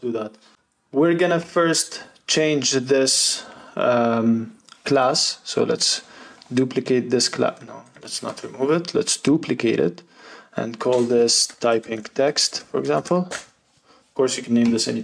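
The audio contains no audible technical faults.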